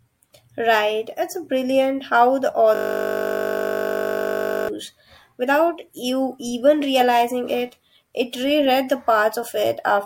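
A speech clip with a system hang loop from 2.75 to 4.69 s, after "brilliant how the". One 20 ms slice repeats, making a steady 50 Hz buzz, which fits a frozen driver cycling a 20 ms buffer.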